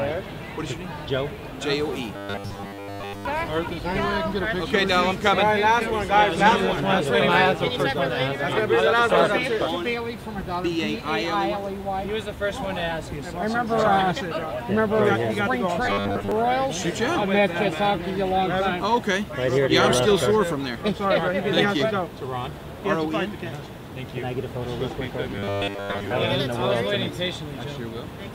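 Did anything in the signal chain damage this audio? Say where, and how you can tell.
Yes. The driver or buffer stage was likely starved of data, so it kept looping the last 10 ms of audio in place of most of the real signal. The result is robotic sound from repeated short buffers, a rigid metallic 100 Hz buzz, at 2.16 to 3.25 s, 15.86 to 16.32 s and 25.33 to 26.11 s.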